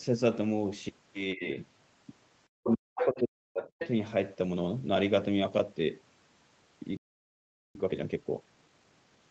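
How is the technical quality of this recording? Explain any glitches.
The recording has four distinct faults, heard through a call path whose top end stops at about 8 kHz.

Speech suppressed in double talk hits from 1.35 to 1.44 s, a dip of roughly 15 dB, and again from 2.61 to 3.81 s, where the sound falls by roughly 40 dB. The likely cause is an echo canceller that could not separate the talker from the other side and turned both down.

The other side's voice leaking through appears as scraps at 2.71 to 2.75 s, 2.97 to 3.20 s and 3.80 to 3.89 s. These run from about 20 dB below the speech to nearly as loud as it, at about 5 dB below. The likely cause is loudspeaker playback that the echo canceller failed to remove. They come during or right at the end of the suppressed stretch, and the second voice is audible, not just a gap.

A playback stall silences the sound from 6.97 to 7.75 s, for 0.78 s. 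The player likely ran out of data or was blocked. It differs from double-talk suppression: this is a clean mid-flow stop with nothing underneath, followed by recovery.

Time-compressed catch-up follows from 7.75 to 9.19 s, playing at 1.5 times speed while keeping normal pitch. The player shortens its backlog by cutting out and cross-fading small pieces. It sounds hurried, not chipmunk-like, and that sets it apart from a simple speed-up.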